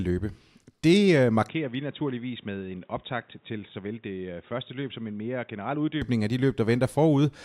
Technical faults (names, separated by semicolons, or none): input switched to a poorer device